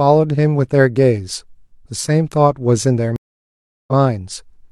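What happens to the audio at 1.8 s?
Nothing goes wrong at 1.8 s; the speech carries straight through that moment with no dropout, click, distortion or other audible fault.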